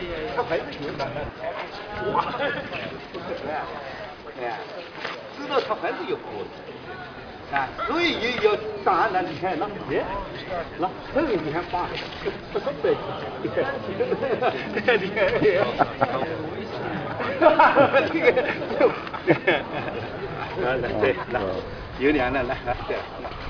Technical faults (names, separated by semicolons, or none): none